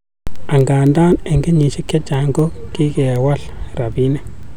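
From 0.10 to 4.43 s, word clock ticks run through the speech. They land about every 0.3 s, roughly twenty in all. The receiving device is not locked to the sender's clock. Each slip drops or repeats a sample, heard as a sharp, uneven tick.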